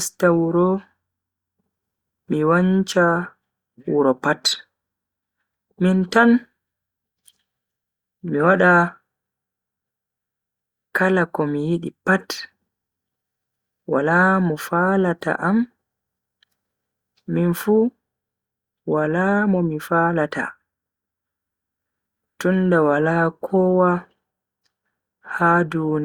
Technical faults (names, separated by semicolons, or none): none